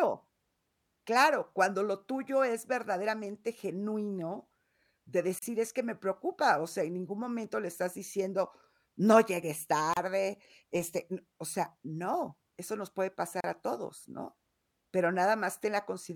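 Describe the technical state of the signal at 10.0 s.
Just before 10.0 s, from 9.93 to 9.97 s, the speech breaks for about 32 ms in a gap at a join of encoded pieces. The segments on either side were encoded as separate runs and spliced without removing the encoder's start-up delay and last-frame padding, so that stretch of silence remains. The dropout's edges are smeared by the codec, and the speech then resumes exactly where it stopped.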